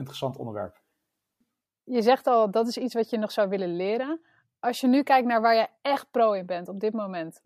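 No technical faults are audible in this speech.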